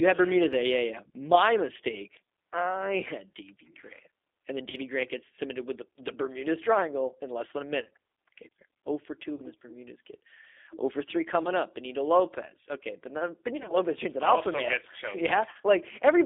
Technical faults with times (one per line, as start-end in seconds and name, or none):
0.00-16.26 G.729 codec
4.70-4.77 VoIP packet loss concealed by the speech codec
7.81-7.90 VoIP packet loss concealed by the speech codec
9.35-9.42 VoIP packet loss concealed by the speech codec
11.43-11.48 VoIP packet loss concealed by the speech codec
13.57-13.76 VoIP packet loss concealed by the speech codec
15.50-15.68 VoIP packet loss concealed by the speech codec